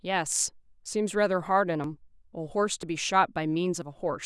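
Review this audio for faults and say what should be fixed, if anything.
Four brief skips in the speech, at 0.86, 1.84, 2.83 and 3.82 s, point to audio missing between chunks. Each loses roughly 15 ms, and the two sides butt together with no silence. The even spacing of about 1 s suggests the likely cause is a recorder working in 1-second chunks and dropping a sliver at each handover. On a waveform each shows as an abrupt step; on a spectrogram, as a thin vertical seam. Continuous, gapless buffering across chunk boundaries would prevent it.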